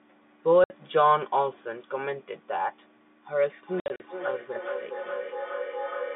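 At 0.64 s a 60 ms gap of packet loss filled with silence cuts the speech with hard edges, which fits three 20 ms packets dropped. From 3.35 s to the end, feedback echo between two devices returns each word roughly every 400 ms, up to about 11 dB below the speech, thin and ringing, because one device replays the other's microphone and that sound is picked up again. Between 3.8 and 4.0 s further packet loss removes 120 ms in scattered silent holes, the longest 60 ms, over the echoing narrowband G.711 line.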